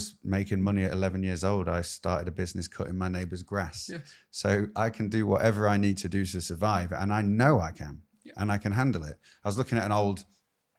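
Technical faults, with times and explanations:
Nothing here gets in the way; the speech just runs along without any technical trouble worth pointing out.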